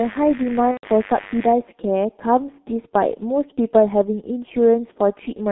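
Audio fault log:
throughout: G.723.1 codec. Nothing passes below about 250 Hz or above 3.7 kHz, and the damage is heavy: the speech is muffled and hoarse, with consonants smeared together. That points to a low-rate telephony coder running near 6.3 kbit/s, with 30 ms frames and a slowly updated voice model that can't follow fast changes. Unlike simple band-limiting, where the sound stays clean within a narrow range, this one is rough and grainy throughout.
0.71–0.86 s: VoIP packet loss concealed by the speech codec. For about 120 ms, which fits four lost 30 ms frames, the speech stops sounding natural: the first two frames become a stretched continuation of the last sound, growing quieter frame by frame, and the last two are muted. The decoder is guessing forward from its last pitch and filter while fading the gain. A plain dropout would go silent or click. Here the start of the gap is filled with a fading imitation of the sound before the codec mutes it.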